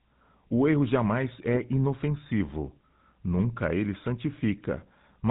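From start to finish the speech has passed through the GSM full-rate codec. The sound is squeezed to the low rate of that first mobile-phone coder, which fits about 13 kbps. It models the vocal tract and rebuilds the excitation from coarse, regularly spaced pulses, so fine detail of the source is thrown away. Nothing above 4 kHz survives. The voice comes out muffled and plainly buzzy and gravelly throughout.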